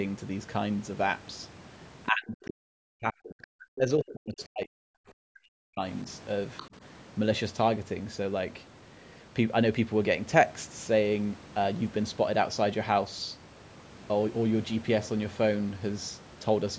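From 2.1 to 4.83 s the speech keeps dropping away. It dips, thins and breaks into pieces for about three seconds in all. At its deepest it falls by roughly 40 dB. This is speech suppressed in double talk. The likely cause is both sides talking at once, so the echo canceller could not tell the near talker from the loudspeaker echo and turned everything down. It happens again from 5.08 to 5.82 s, for most of that stretch, with a similar deep drop.

At 6.57 to 6.68 s a brief scrap of the other side's voice leaks through. It is short and faint, around 20 dB below the speech. This is likely echo that the canceller failed to fully remove from the microphone signal. The call's microphone processing carries nothing above 8 kHz.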